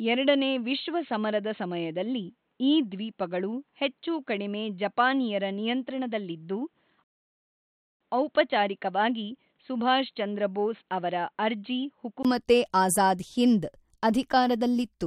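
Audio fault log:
0.00–12.25 s, input switched to a poorer device (likely): sound stays dull, with nothing above 4.2 kHz, about 5 dB quieter, and a faint new hiss, then clears after a 20 ms gap.
7.04–8.01 s, rebuffering stall: about 0.97 s of silence, then the sound resumes exactly where it stopped, adding time without losing anything, unlike a dropout.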